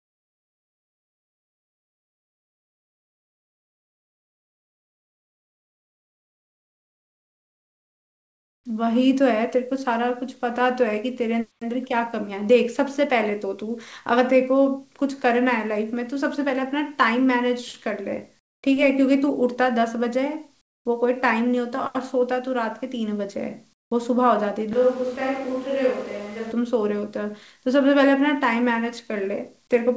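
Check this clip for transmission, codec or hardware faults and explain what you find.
Four kinds of fault appear in this speech clip, heard over a call link whose sound stops at 8 kHz, which fits G.722.

From 0 to 8.64 s, and briefly at 18.39–18.63, 20.61–20.85 and 23.73–23.91 s, there is comfort noise in place of the background. Discontinuous transmission likely halted the sender, and the receiver filled the gaps with synthetic noise. The real background becomes a smoother synthetic noise, about 20, 12, 22 and 2 dB quieter.

From 8.68 to 9.01 s there is a jitter buffer slow-down. The receiver repeated pitch periods, adding 43 ms, so the speech plays at 89% speed with drawn-out sounds.

From 9.20 to 10.36 s there is a jitter buffer speed-up. The receiver trimmed short pitch-period pieces, about 50 ms in total, so the speech runs at 104%.

From 24.73 to 26.52 s there is a switch to a distant microphone, likely after the close microphone dropped out. 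The speech turns roomy and hollow, with room noise about 25 dB below it and the level roughly unchanged.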